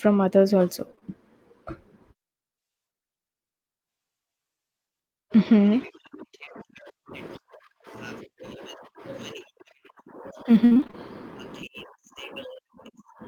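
Speech, with three kinds of network and converter faults. Short concealed packet loss appears just after "others also": three consecutive 20 ms holes between 0.91 and 1.03 s, each patched by extending the preceding sound, giving a brief smear before the audio blends back. A single similar hole at 6.45 s leaves a small wobble. From 7.13 s to the end, sample clock jitter adds roughness that tracks loud, bright passages and disappears in pauses. The sampling instants wander by a few microseconds, putting the error roughly 40 dB below the signal. Between 10.65 and 10.95 s, repeated packet loss produces robotic sound: around seven dropouts, the longest 62 ms, leave about half of that stretch synthesised, so the audio turns choppy with fragments missing.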